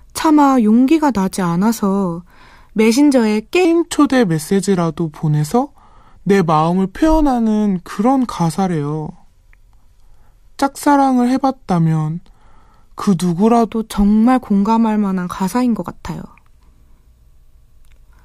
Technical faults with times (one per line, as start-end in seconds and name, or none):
3.65-13.72 section at the wrong speed